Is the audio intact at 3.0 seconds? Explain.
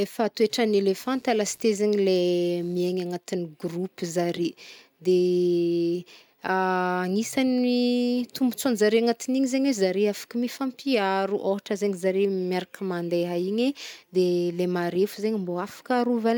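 No. From 1.02 to 3.02 s, computer activity noise is present: load changes in the computer shift the audio circuit's shared ground, adding a faint buzzing chirp pulsing at around 150 Hz, roughly 35 dB below the speech, that follows the machine's activity, not the sound.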